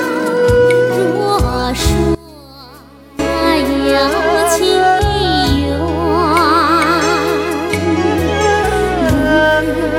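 A brief glitch at 0.96 s is a corrupt frame decoded: a few damaged compressed frames were played, spraying misplaced energy that peaks around -20 dBFS. From 2.15 to 3.19 s the sound drops by about 22 dB and turns faint, most likely one channel inverted, so the shared content cancels in a mono sum.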